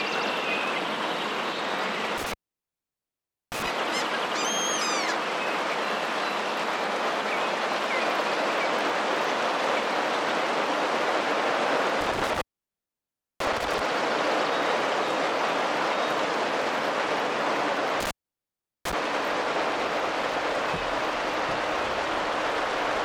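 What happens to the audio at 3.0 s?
The sound drops out, with crackle at the edges of the gap and faint hiss in between. This is an intermittent contact from 2.18 to 3.68 s: a loose cable or plug opens for about 1.18 s, breaking the signal path.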